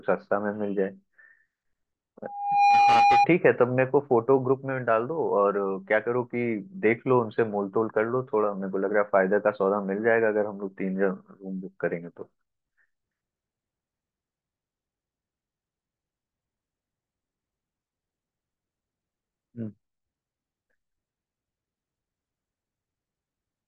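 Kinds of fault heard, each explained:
Loudspeaker feedback squeal: From 2.23 to 3.27 s, a steady tone at 811 Hz swells out of the speech in under half a second, ending up about 5 dB above it. The microphone is picking up its own loudspeaker. At that frequency the loop gain exceeds one, so the tone feeds itself.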